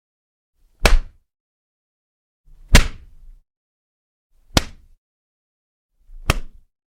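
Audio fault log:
No faults detected across the clip, so nothing to log.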